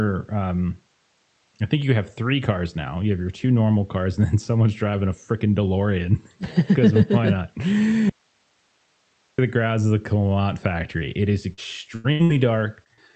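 At 8.10 s, just after "why not", the speech cuts out abruptly for about 1.29 s in an audio dropout to a faint residue, likely a signal loss upstream while the path stayed live. The gap holds only hiss, about 45 dB below the speech, until "the grounds of the" resumes at 9.38 s.

From 11.37 s to 12.99 s, repeated packet loss produces a choppy, robotic stretch. Six separate holes, the longest 84 ms, are patched by extending the preceding sound, so about a fifth of the span is synthetic continuation.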